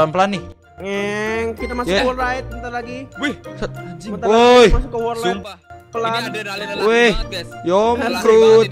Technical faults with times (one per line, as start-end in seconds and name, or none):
0.52-0.78 sudden gain jump
5.43-5.70 sudden gain jump